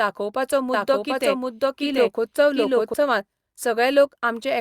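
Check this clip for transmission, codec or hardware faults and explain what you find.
One fault stands out: a doubled audio track between 0.74 s and 2.94 s. Across that span the speech is heard twice, a second full-band copy trailing roughly 0.7 s behind at about the same loudness, with no reverberant tail or room colouring, and it switches on and off abruptly. This is likely a second capture through a slower path, or an edit holding two misaligned copies. On a spectrogram, the harmonic patterns repeat shifted along the time axis; the waveform shows overlapping envelopes with hard edges.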